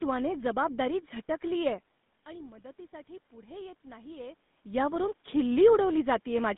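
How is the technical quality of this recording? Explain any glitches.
The recording carries audible codec damage throughout, plus one gain adjustment in the second half.

GSM full-rate codec: Across the whole clip the speech has a buzzy, gravelly roughness and a narrow telephone band, roughly 150 Hz to 3.6 kHz, with nothing above 3.8 kHz. This fits a 13 kbit/s GSM full-rate coder, which rebuilds the voice from a vocal-tract model driven by a sparse pulse excitation.

Automatic gain rising: From 3.44 s to 5.12 s the level climbs gradually by about 3 dB, and the voice and room noise swell together. The input had dropped by about 17 dB, and the gain control compensated slowly.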